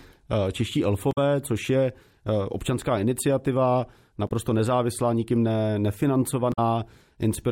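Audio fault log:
1.11–1.18 s, 4.27–4.31 s and 6.52–6.59 s: damaged data in a compressed stream. Three short glitches cut through the speech, each lasting only 40 to 70 ms. Some bytes in the coded stream got mangled, so the decoder misread those frames, lost its place, and had to hunt for the next valid frame header before it could carry on. That's why each one is a brief chirp, squawk, click or short hole.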